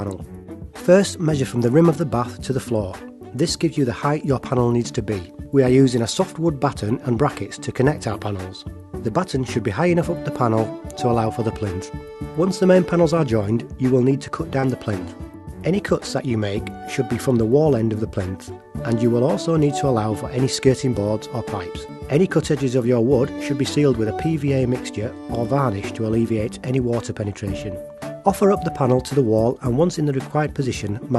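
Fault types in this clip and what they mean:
Short concealed packet loss: at about 14.59 to 14.66 s, roughly 40 ms of the call didn't reach the decoder in time, so the receiver papered over about 32 ms of it by extending the last bit of sound, pitched if voiced and as shaped noise if not, before easing back into the real audio. You hear it as a quick smear or wobble there, sitting on top of the Opus call path's usual top end, which stops at 12 kHz.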